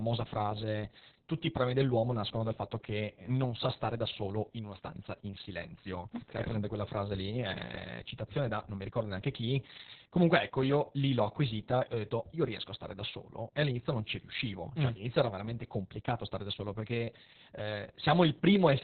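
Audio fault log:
Throughout: Opus voice compression. Nothing above 4.3 kHz, so speech is muffled and hoarse. The coarse, slightly robotic texture fits very low-bitrate narrowband SILK, around 6 kbps.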